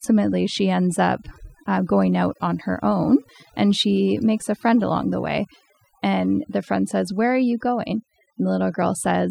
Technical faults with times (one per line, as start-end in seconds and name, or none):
0.00-9.30 overdone noise removal